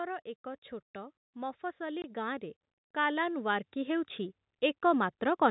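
Automatic gain rising runs from 0.93 to 4.19 s. The gain control judged the input too quiet and raised its gain gradually, lifting the speech and the background together by about 10 dB, so the whole sound swells gradually over those three seconds.

Packet loss filled with silence occurs from 2.02 to 2.04 s, in the middle of that rise. A 20 ms hole, consistent with one lost 20 ms packet, was replaced with silence at the receiver, cutting the speech abruptly.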